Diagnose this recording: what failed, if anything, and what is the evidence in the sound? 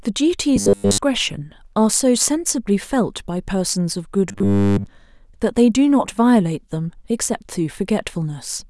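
Robotic sound from repeated short buffers, at 0.56 to 0.98 s and again at 4.29 to 4.86 s, in this speech. Both stretches carry a rigid, metallic buzz at 100 Hz that still loosely tracks the speech. In the first, most of the audio is replaced by repeats; in the second, all of it. This likely points to the driver or buffer stage starving: fresh audio arrived too seldom, so a 10 ms block was replayed in place of skipped audio.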